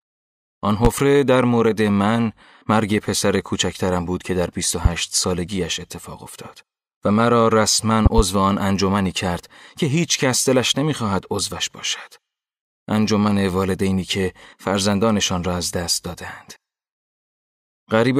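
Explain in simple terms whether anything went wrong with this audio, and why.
Loud pops are heard three times in this speech: at 0.85 to 0.88 s, at 4.85 to 4.89 s, and a quick double pop from 8.06 to 8.22 s. Each stands well above the level of the speech, which carries on underneath. Such pops come from a sudden jolt of electricity getting into the signal, likely a plug, a switch, a static spark or a driver hiccup. The equipment downstream turns that jolt into a sharp thump.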